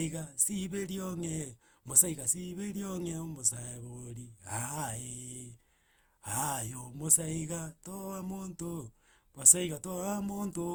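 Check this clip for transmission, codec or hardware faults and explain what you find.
The clip shows generation loss throughout. The speech has likely been decoded and re-encoded with a lossy codec about five times, in a way that fits Opus at 64 kbit/s. Each pass quantises again on a shifted frame grid, so coding noise piles up. The result sounds swirly and hollow, more smeared than one pass at that bitrate would be, with consonant attacks blurred. The band still extends to about 20.1 kHz.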